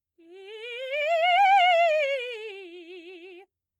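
A short piece of music carries clock drift between sender and receiver for its whole length: the sending device's audio clock runs fast, by something like 5 percent, so material arrives quicker than the receiver plays it out and its jitter buffer keeps filling. To stop it overflowing, the receiver makes repeated timing corrections from 0.03 s to 3.65 s, trimming small slices out of the stream so the playback keeps pace with a source running at 105 percent. Every edit goes the same way, removing audio rather than repeating it, and they fall at uneven intervals, so the rhythm feels faintly unsteady, with tiny skips or hiccups instead of one obvious glitch. On a waveform the cuts appear as small discontinuities where the envelope jumps slightly or a cycle ends abruptly, scattered irregularly through that stretch. On a spectrogram they show as thin vertical seams, brief broadband ticks or slight misalignments in sustained partials, with onsets arriving a touch earlier than a steady grid would put them.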